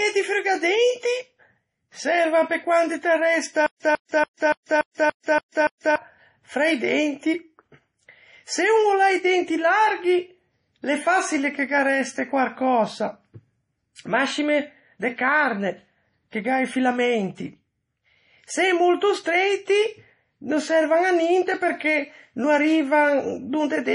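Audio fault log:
throughout: MP3 compression. The encoder was likely starved of bits, and the damage is heavy, which fits a bitrate around 32 kbps. With too few bits, it dropped the weaker frequency components, and those components flicker in and out from one frame to the next. The result is a watery, swirling texture in the speech. Nothing is present above 10.6 kHz, so the top of the spectrum is missing and sibilants lose their crispness.
3.66–5.96 s: stutter with silent gaps. Playback likely stalled and kept retrying. On each retry it replayed the same fragment of about 147 ms, then ran dry for about 140 ms of digital silence. The cycle repeats evenly every 287 ms, eight times in all. The speech that should have filled this stretch never arrives, and normal playback resumes with "fra i denti".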